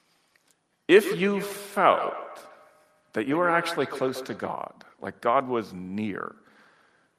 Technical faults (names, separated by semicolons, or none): feedback echo between two devices